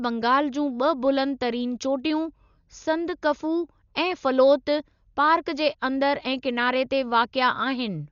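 From start to finish the speech sounds dull and band-limited, with nothing above 6.9 kHz, and a rough, fluttering noise hangs around voiced tones. Heavy damage of this kind points to Dolby Digital compression, likely at a low rate of about 48 kbps, where the encoder narrows the band and leaves many frequency lines without mantissa bits for the decoder to fill with noise. A spectrogram shows a hard ceiling at 6.9 kHz and speckled, grainy patches between harmonics.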